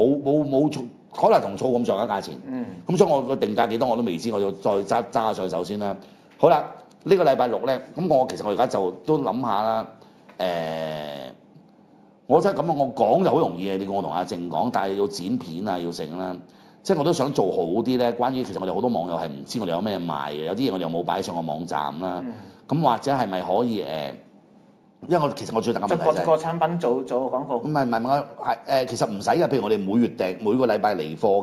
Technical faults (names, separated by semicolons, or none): imaging from linear upsampling